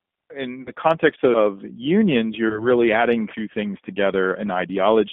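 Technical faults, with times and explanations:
Throughout: G.729 codec, 8 kbit/s, band-limited to about 200 Hz–3.6 kHz; rough, synthetic, plainly audible coding damage, steady rather than intermittent like dropouts.
0.62–0.71 s and 2.49–2.68 s: VoIP packet loss concealed by the speech codec; lost frames are extrapolated into fading buzz or coloured noise, before "context of unions" and "adding two things", lingering after packets resume.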